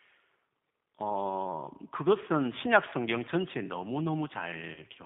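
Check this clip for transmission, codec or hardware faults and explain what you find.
Two faults are audible: codec damage throughout and one short dropout near the end.

The G.729 codec damage runs through the whole clip. The speech is band-limited to roughly 150 Hz to 3.6 kHz. It sounds rough and slightly synthetic, because it is rebuilt from a vocal tract filter, a pitch predictor and a few pulses per frame. That fits an 8 kbit/s G.729A line.

VoIP packet loss concealed by the speech codec occurs from 4.74 to 4.80 s. About 30 ms of audio went missing, which fits a single lost packet. The decoder filled the gap by repeating its last pitch and filter at falling gain. This gives a brief buzzy or noisy smear, and the speech stays weak or distorted for a moment after it.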